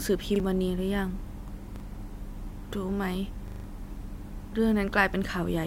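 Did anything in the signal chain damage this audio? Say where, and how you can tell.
Yes, a repeated buffer at the driver or buffer stage. An identical 40 ms slice of speech plays twice at 0.36 s and 1.76 s, and five times from 3.48 to 3.64 s, with hard joins. Exact copies, not silence or smoothed fill, separate this from dropout or concealment.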